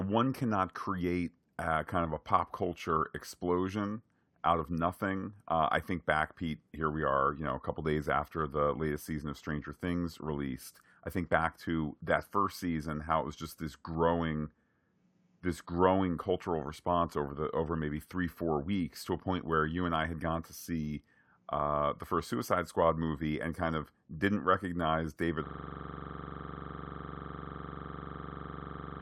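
Speech runs normally until 25.46 s, where a system hang loop takes over and lasts to the end of the clip: one 42.67 ms slice of audio repeats exactly, about 83 times, at 23.4 Hz, which fits a 2048-sample ring buffer replayed while the driver froze. It sounds like a coarse, rattling buzz. Unlike a network stutter or dropout, the repeats are identical and perfectly regular, and the speech never resumes.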